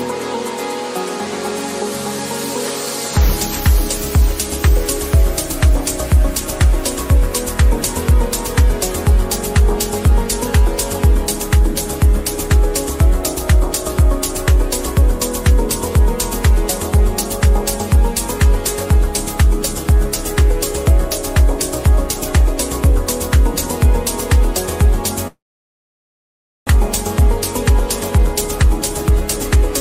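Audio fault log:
25.27–26.70 s, call audio freeze: sound stalls for 1.4 s, mostly silence after a brief fading tail, likely delayed packets draining the jitter buffer; nothing lost, only delayed.
27.69–29.70 s, jitter buffer speed-up: playback runs about 6% fast at unchanged pitch as short pitch-period slices, roughly 150 ms total, are trimmed to recover the built-up delay.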